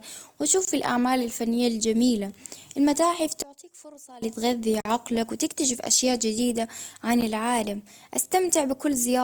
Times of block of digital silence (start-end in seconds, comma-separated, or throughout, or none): 0.65-0.67, 4.81-4.85, 7.21